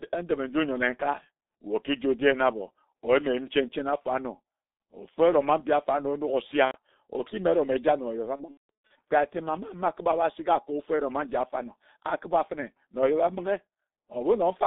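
From start to finish the speech is shaped by the G.723.1 codec. The line band runs only from about 200 Hz to 3.7 kHz, so nothing bright survives. The codec damage is heavy. Its coarse, slowly updated voice model leaves the speech muffled and hoarse. Consonants smear together. The thin, rough texture fits the 6.3 kbit/s mode.

At 6.65 s comes VoIP packet loss concealed by the speech codec. About 90 ms is missing, up to 6.76 s, which fits three lost 30 ms frames. The decoder repeats its last pitch and filter at falling gain. The sound stretches into a short buzzy tone or coloured noise that fades.

From 8.36 s to 8.92 s the same concealment returns, worse. Losses totalling 390 ms are scattered over 540 ms, with the longest unbroken gap about 180 ms. The speech keeps dissolving into buzz and fading noise. Each recovery stays weak and distorted before the next dropout hits.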